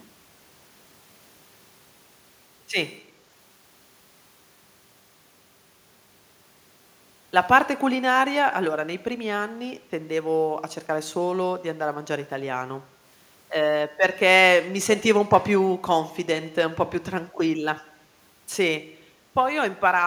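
At 14.96 to 15.04 s a brief, faint scrap of the speech comes back about 295 ms after the original, sitting roughly 20 dB below the main signal, like a ghost trailing the talker for a moment. This is an echo leak, likely from the far end playing the call over a loudspeaker: its echo canceller failed to remove everything the microphone caught, so a delayed remnant was sent back into the line.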